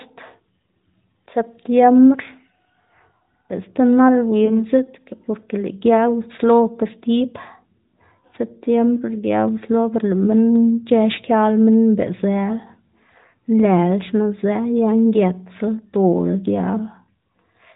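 Speech over a mobile link shows one case of lost AMR speech frames, from 4.46 to 4.65 s. There is a brief dip or warble as the decoder briefly repeats the last good pitch and vocal tract settings at reduced gain, which fits a single missing 20 ms frame, before the voice recovers. The AMR narrowband mobile codec audibly cuts everything above 4 kHz and adds only light coding colouration.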